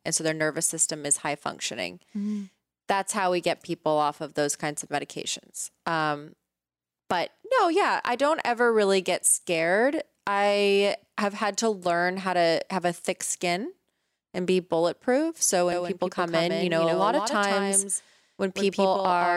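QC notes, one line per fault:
15.72 s to end, doubled audio track. A second full-band copy of the speech trails about 150 ms behind, roughly 5 dB quieter. It cuts in abruptly, with no decay or room colour. A slower capture path likely recorded the same signal twice.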